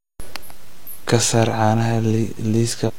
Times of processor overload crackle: none

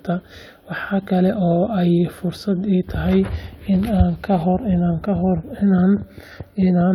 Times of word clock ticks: none

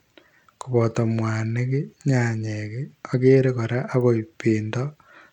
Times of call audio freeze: none

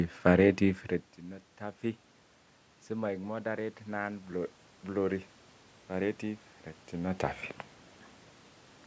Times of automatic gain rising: 3.01-5.31

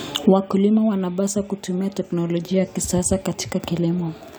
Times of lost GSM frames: none

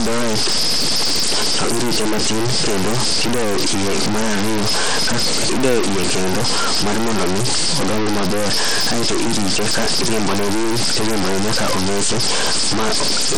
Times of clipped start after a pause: none

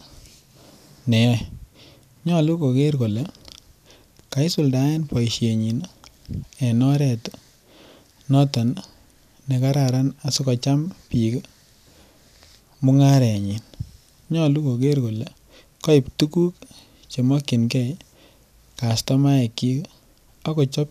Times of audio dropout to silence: none

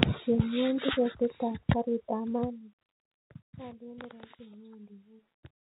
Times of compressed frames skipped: none

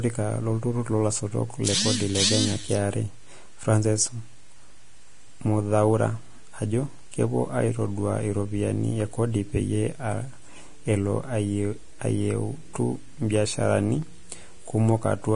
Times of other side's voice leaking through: none

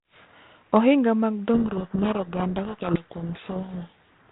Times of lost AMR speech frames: none

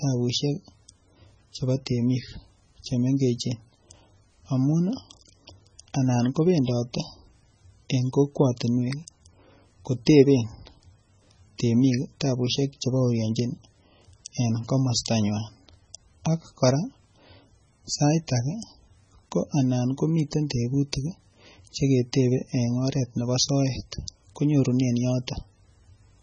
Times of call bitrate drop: none

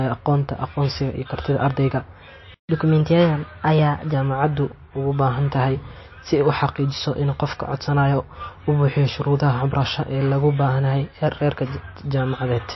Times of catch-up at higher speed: 2.69-4.14

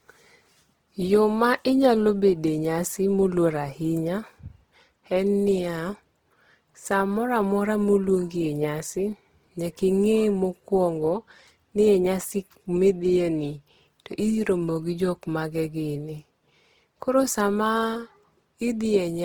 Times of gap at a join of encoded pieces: none

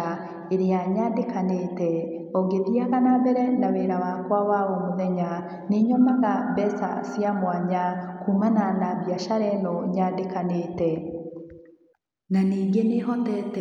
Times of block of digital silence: none

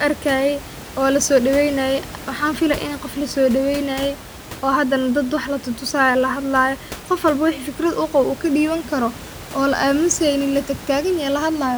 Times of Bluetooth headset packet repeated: none

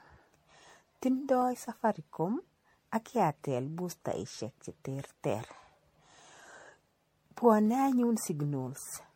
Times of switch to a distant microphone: none

